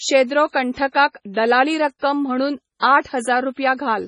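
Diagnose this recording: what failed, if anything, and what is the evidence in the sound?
The codec stage failed: the speech has nothing above 10.5 kHz, a hard ceiling on a spectrogram, with watery, swirling texture as weak bands flicker between frames. This heavy damage is likely MP3 compression at a low bitrate, consistent with roughly 24 kbps.

Pre-echo shows before attacks at 0.51–0.54 s, 0.92–0.94 s, 1.99–2.02 s and 2.79–2.82 s, spanning 25 to 37 ms. The waveform shows short hiss rising before each onset. The transform block spreads noise sized for the loud attack backward into the quiet moment preceding it.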